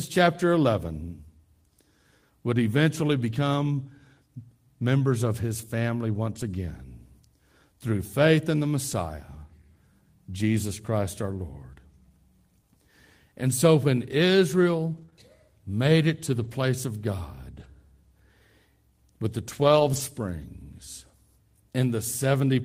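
Speech with repeated network packet loss. Seven times, lost packets came back as a lost packet rebuilt from error correction: the following packet carried a low-bitrate copy that the decoder played instead, so nothing drops out, but those stretches turn rougher and noisier. This happens at 8.91–8.93 s, at 14.11 s after "so when", at 14.97–15.03 s, 16.44–16.50 s, 17.56–17.66 s, 19.56–19.98 s after "with the" (the longest, about 220 ms of rebuilt audio), and 20.42–20.44 s. Right after the third of these, two bouts of short concealed packet loss at 15.05–15.10 s and 15.10–15.14 s, just before "made it to the", mean audio arrived too late. The receiver extended the preceding sound to fill each hole, heard as a brief smear or wobble.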